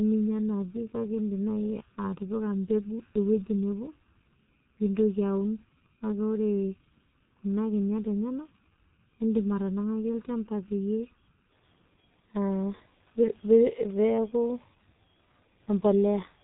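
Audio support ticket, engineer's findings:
G.723.1 codec, whole clip. Muffled, hoarse speech, blurred consonants, nothing above 3.8 kHz. Heavy damage, consistent with a 6.3 kbit/s G.723.1 leg: 30 ms frames, slow-updating voice model smearing transients. Unlike plain low-pass band-limiting, the roughness and consonant smear remain even in the passband, and they persist past 11.5 s when the hollowness stops.

Channel delay (comb filtering), 0.0 to 11.5 s. Hollow, phasey tone. One channel lags by well under a millisecond, around 0.7 ms, and is summed to mono. Fixed notches, first near 700 Hz, repeating at even spacing. Unlike the codec's dullness, the notches sit still, end at 11.5 s, and repeat up through the band below the codec ceiling.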